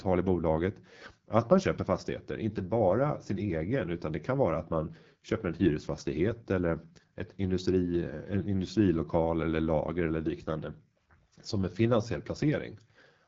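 Throughout, the speech carries AMR wideband (HD Voice) codec damage, plainly audible as rough, raspy texture, which fits the low 8.85 kbit/s rate. Nothing sounds above 7.5 kHz.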